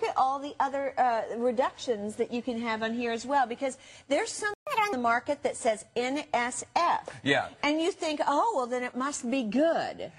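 At 4.54 s the sound cuts out in mid-flow and stays silent for about 130 ms, until 4.67 s. This is a playback stall, most likely the player running short of buffered data or having its output thread held up. Unlike a dropout, where a slice of the signal is simply lost and the audio skips ahead, nothing is missing here. When output resumes, it picks up exactly where it stopped, so the silence is inserted rather than substituted.

Straight after, from 4.67 s to 4.93 s, comes catch-up at higher speed. The player works through its backlog at 1.5 times normal speed, resampling rather than time-stretching. Tempo and pitch therefore rise together, with the pitch about seven semitones up. The sound turns briefly hurried and chipmunk-like for roughly a quarter of a second, then drops straight back to normal. That locked pairing of speed and pitch, tied to the preceding gap, separates it from a standalone pitch shift or a slow tape-style wobble.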